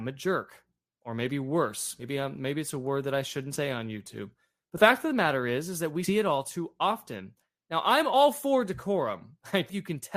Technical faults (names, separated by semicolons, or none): compressed frames skipped